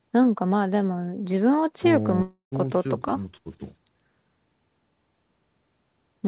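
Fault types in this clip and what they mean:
Long network dropout: From 2.22 s to about 2.54 s the speech gives way to a fading buzz-like continuation of the last sound, which then drops to silence for roughly 0.11 s before speech resumes with about 0.3 s missing. The likely cause is a stretch of lost network packets. What sets this apart from a brief packet-loss glitch is the length: the concealment runs out and leaves a true gap, all within the 4 kHz narrowband sound of the call.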